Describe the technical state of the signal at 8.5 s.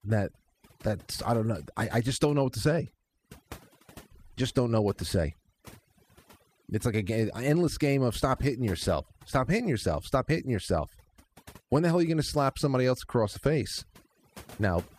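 At 8.5 s the gaps around the speech drop and break up into twinkling specks. This is overdone noise removal, present across the whole clip rather than just at this moment. A noise reduction stage set far too aggressively is cutting individual frequency bands down or out whenever they sit close to its noise estimate, so the quieter components of the voice are stripped away along with the noise.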